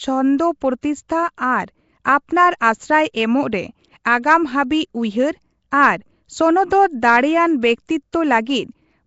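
From start to finish the speech carries a rough, hissy halo and a smeared, underwater quality, likely from Nellymoser compression at a rate that fits about 32 kbps. On a spectrogram, weak bands appear as noise-filled patches, and nothing shows above 7.7 kHz.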